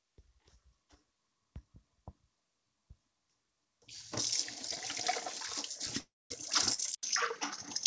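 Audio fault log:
5.72 s and 6.74 s: short stall from a late packet. At each point the sound hangs on a held, faintly buzzy stretch, about 27 ms at 5.72 s and 37 ms at 6.74 s, then carries on without skipping anything. A packet arrived late, the jitter buffer emptied, and the receiver stretched the last sound until it caught up.
5.99 to 6.32 s: call audio freeze. The sound stops and is replaced by a fading buzz that drops into about 220 ms of silence, 316 ms of filler in all, before resuming exactly where it left off. This points to packets likely held up in transit, draining the jitter buffer so the receiver had to improvise a gap.
6.95 to 7.87 s: input switched to a poorer device. After an 80 ms silence the sound turns duller, with nothing above 6.6 kHz, a level shift of roughly 5 dB and a new noise floor roughly 35 dB down. Likely cause: capture moved to a lower-quality microphone or headset call profile.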